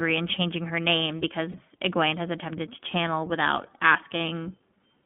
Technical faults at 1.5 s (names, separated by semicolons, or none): iLBC codec; lost iLBC frames